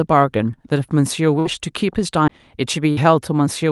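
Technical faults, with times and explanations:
1.39–1.48 s and 2.91–3.00 s, burst of packet loss: Each time, roughly 60 ms of speech never arrives. For about 56 ms the receiver stretches the last sound and fades it into a held buzz or dull hiss, then resumes further on. Unlike a skip, there's no click, only smoothed-over concealment.
2.28 s, CD skip: A tick and a very brief mute of roughly 15 ms, after which the speech picks up from a different point, as if the laser jumped tracks on the spiral. Nothing bridges the gap, so the cut is abrupt rather than held and faded like packet concealment.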